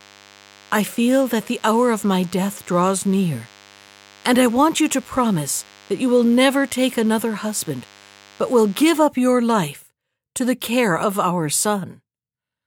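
From the start of the speech until about 8.87 s, a DECT cordless phone buzz sits underneath: a thin, steady buzz repeating 100 times a second, well below the speech in level. A nearby DECT handset or base transmits a short radio burst every 10 ms, and the audio circuitry rectifies those bursts into sound. Unlike mains hum, which is smoother and centred on 50 or 60 Hz, this buzz is harsh and rich in harmonics, with a gated, rasping edge.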